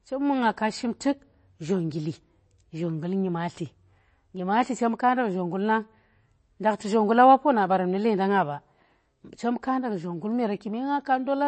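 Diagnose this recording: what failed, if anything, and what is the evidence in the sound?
Codec stage. Throughout, the speech stops above 8.3 kHz and sounds watery. Likely MP3 compression, with a starved encoder near 32 kbps zeroing weak lines.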